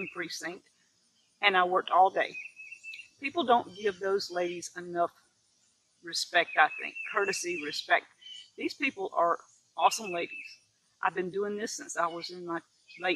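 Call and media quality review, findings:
Sound cut by the noise suppressor at 0.61–1.41 s, 5.12–6.04 s, 9.46–9.73 s, 10.58–11.02 s and 12.62–12.89 s. Sound misread as noise and attenuated by about 11 to 12 dB. Steady and decaying portions sink or get clipped short.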